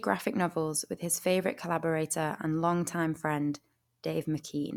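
Nothing technically wrong turns up anywhere in this short bit of speech, so there's no fault to point to and no time or cause to give.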